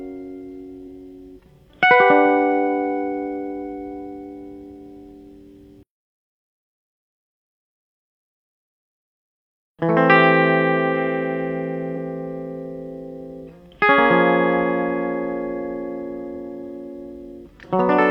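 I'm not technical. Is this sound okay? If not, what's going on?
No. This music has two brief glitches caused by damaged data in a compressed stream: a tiny blip at 0.83 s and a longer one from 11.93 to 11.98 s. Part of the compressed file was corrupted, so the player briefly misread the audio there and had to find its place again. Unlike a simple dropout, these come from the player losing its place in the data.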